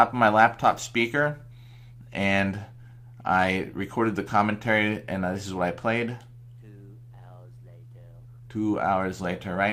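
Nothing stood out on listening; no technical fault could be heard anywhere in the audio.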